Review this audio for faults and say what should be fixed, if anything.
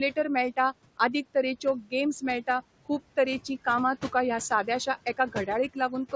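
Noise suppressor artifacts run through the whole speech clip. The suppressor treats the steady room noise as something to remove frame by frame. It pulls it down by about 17 dB in the pauses and lets it come back up under the speech, so the background audibly pumps in and out. The room noise itself sits only about 17 dB below the speech, and nothing reaches above 8 kHz, which fits a G.722 call path. Reducing the suppression depth, or lowering the room noise at the microphone so the suppressor has less to remove, would prevent the pumping.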